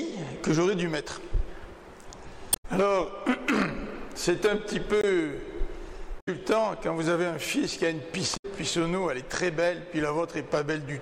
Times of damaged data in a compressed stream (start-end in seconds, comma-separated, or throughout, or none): 2.50-2.65, 6.16-6.28, 8.33-8.45